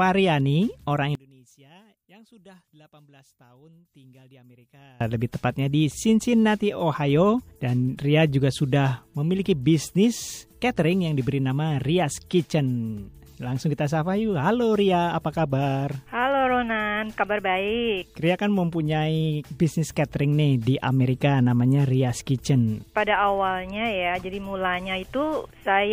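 From 1.15 s to 5.01 s, the sound collapses to a faint trace, roughly 31 dB below its normal level. Centred content nearly disappears. What remains is only the small difference between left and right. The likely cause is one channel inverted: one stereo side has flipped polarity, so matching material cancels when the two are summed to mono. At 5.01 s the full sound returns.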